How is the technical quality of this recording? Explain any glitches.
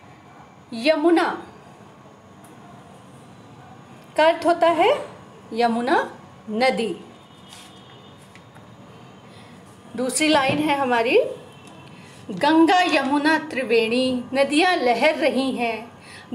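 The technical quality of this recording is good, and there are no glitches to explain.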